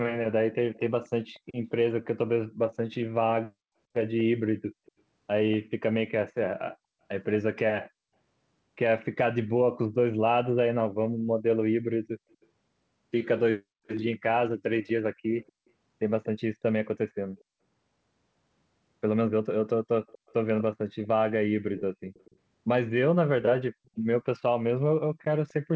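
A loudspeaker's echo canceller likely let its own playback back into the microphone, causing an echo leak from 0.74 to 5.57 s, 12.41 to 17.44 s and 19.29 s to the end. A faint copy of the speech trails 240 ms behind, about 20 to 25 dB down.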